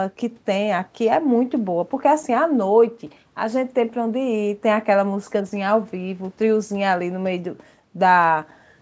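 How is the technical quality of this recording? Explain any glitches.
No glitches turn up anywhere in this recording.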